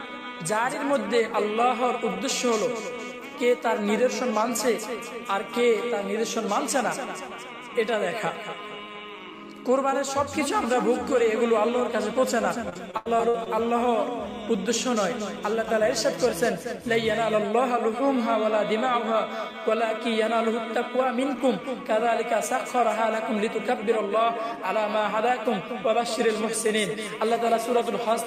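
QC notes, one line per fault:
12.69–13.48 s, repeated packet loss (robotic sound): a rapid run of dropouts, the longest about 82 ms, each patched by stretching the preceding sound. The patches cover roughly 29% of the span, so the audio turns choppy, with fragments missing.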